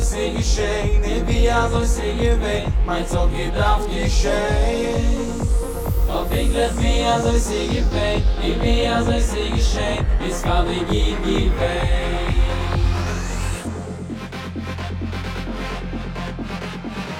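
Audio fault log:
Throughout, channel delay (comb filtering). One channel arrives late by around 20 ms, and the two are summed to mono. Content common to both channels cancels at evenly spaced frequencies. The first notch sits near 20 Hz, and further notches repeat up the spectrum at a close, regular spacing. At this long a delay the sound comes across as rough or slightly doubled.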